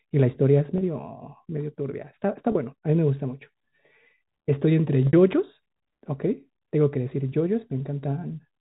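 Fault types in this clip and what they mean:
Packet loss with pitch repetition: 30 ms and 60 ms losses are bridged by repeating a pitch period, giving brief buzzy holds instead of clicks.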